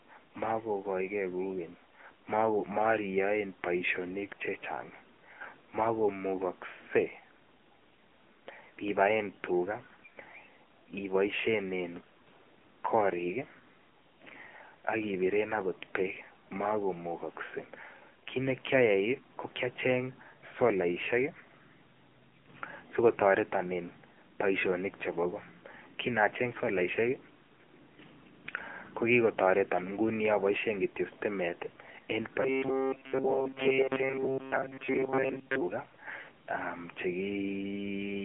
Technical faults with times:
0.00-38.25 AMR narrowband mobile codec
32.42-35.62 robotic sound from repeated short buffers

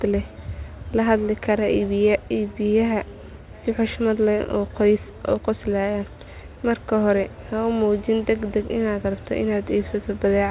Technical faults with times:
none

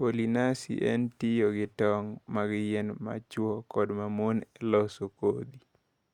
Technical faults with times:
none

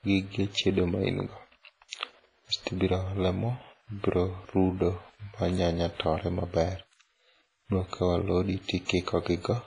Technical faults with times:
0.00-9.66 WMA compression

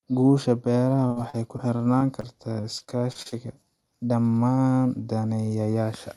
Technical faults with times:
1.07-2.25 repeated packet loss (robotic sound)
2.61-3.34 repeated packet loss (robotic sound)

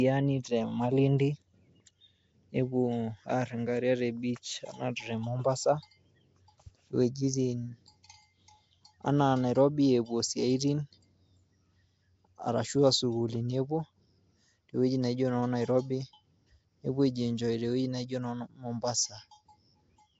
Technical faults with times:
0.00-20.19 Nellymoser compression

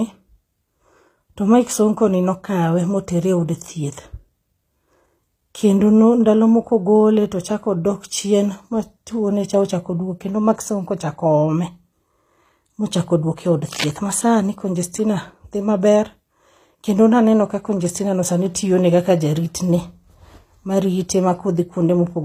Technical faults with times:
0.00-22.24 HE-AAC compression
13.72-13.93 cable scratch noise

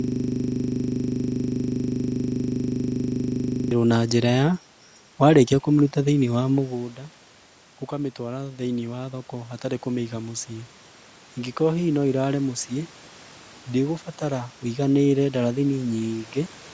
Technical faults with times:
0.00-3.71 system hang loop
7.89-10.54 automatic gain rising

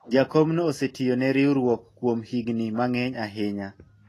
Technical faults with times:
0.00-4.08 Vorbis compression

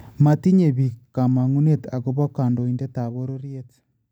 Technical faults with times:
2.59-3.56 zipper noise

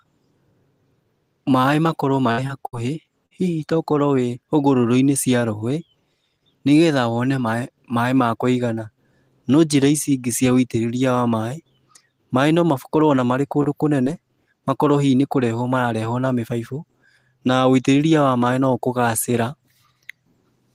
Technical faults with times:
2.31-3.33 repeated packet loss (robotic sound)
13.63-13.66 short concealed packet loss
14.04-14.08 short concealed packet loss

